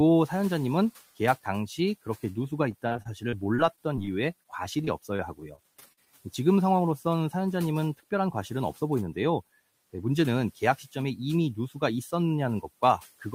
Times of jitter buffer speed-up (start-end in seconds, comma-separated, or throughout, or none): 6.91-7.47